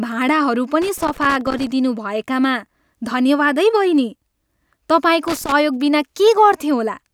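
From 0.82 to 1.71 s, and again from 5.28 to 5.52 s, the speech carries loose connector crackle: a worn or dirty contact keeps breaking and restoring the signal path, chopping the audio and producing irregular bursts of scratchy crackle.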